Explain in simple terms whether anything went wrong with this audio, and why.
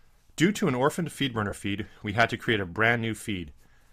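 Lost LE Audio frames cause a brief glitch from 1.50 to 1.52 s, just after "to an orphaned feed" and before "feed we had to". For about 22 ms the Bluetooth link dropped audio, and the decoder filled the gap by repeating the last sound with scrambled detail, leaving a short, noisy smear.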